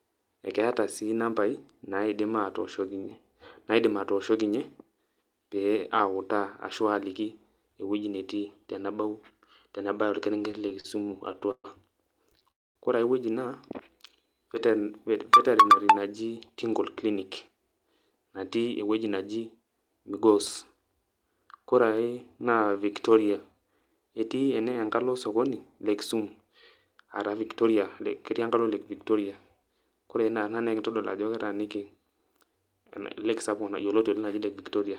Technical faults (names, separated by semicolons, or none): repeated stalls (stutter); call audio freeze; jitter buffer slow-down; jitter buffer speed-up